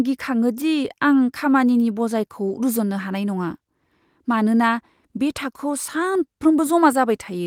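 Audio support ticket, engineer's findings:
Listened through the whole speech recording and nothing turned up worth flagging, so there's no fault to log on this one.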